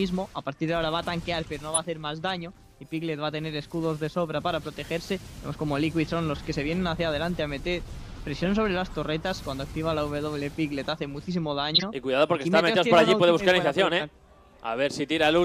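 At 1.73 to 1.78 s, 8.44 to 8.48 s, 11.74 to 11.83 s and 12.98 to 13.02 s, a corrupt frame is decoded. Flipped bits misplaced energy in frequency across two or three frames. Each is a brief chirp or noise burst. The one near 11.8 s is loudest.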